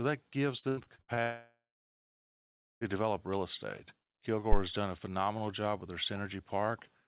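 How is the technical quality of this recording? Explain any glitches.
The recording has three clear faults, all heard through a call path band-limited to 4 kHz, which fits G.711 mu-law at 64 kbps.

From 0.59 to 1.20 s there is repeated packet loss, with a robotic sound. Six short gaps, the longest 86 ms, are each patched by extending the preceding sound. About half of that stretch is filled in this way, so the audio turns choppy.

From 1.23 to 2.84 s there is a long network dropout. The last sound is stretched into a fading buzz or hiss, then about 1.2 s of silence follows. The likely cause is an interrupted stream, and the missing audio is never recovered.

From 4.52 to 4.58 s there is a phantom power thump. A supply switched on or off on a live input pushes a voltage step through the coupling capacitors, producing a deep, brief thump that dies away within about 14 ms.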